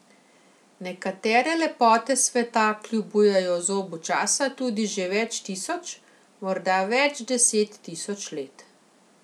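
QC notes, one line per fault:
No faults detected in this speech recording.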